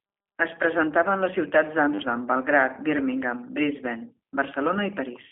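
Speech heard through a G.729 codec throughout: rough, synthetic, band-limited to roughly 200 Hz–3.5 kHz, with a spectrogram showing an empty band above 3.8 kHz, fitting an 8 kbit/s G.729A stream.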